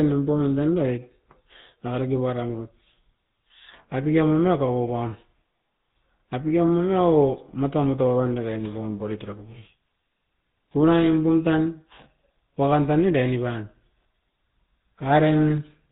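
Speech, coded throughout with the GSM full-rate codec. Nothing passes above 4 kHz. The sparse pulse excitation leaves a plainly audible buzzy, gravelly roughness, fitting a 13 kbps stream.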